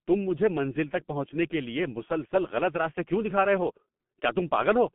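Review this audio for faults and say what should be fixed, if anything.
The whole recording carries G.723.1 codec damage, and it's heavy: nothing above about 3.8 kHz, a phone-line band of roughly 150 Hz to 3.4 kHz, and a slow-updating voice model that leaves the speech muffled and hoarse with smeared consonants, which fits a 6.3 kbit/s stream. To prevent it, record or route the call over a wideband codec at a higher bitrate instead of a low-rate telephony codec.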